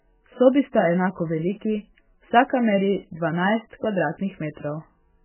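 MP3 compression runs throughout the speech, and the damage is heavy. Nothing reaches above 3 kHz, so the sibilants and breath detail are gone and the speech sounds dull and boxed in. The likely cause is an MP3 encoder starved of bits, which fits a very low rate near 8 kbps. It drops the treble outright and lets weak frequency lines blink on and off between frames, giving a watery, swirling texture with smeared consonant onsets.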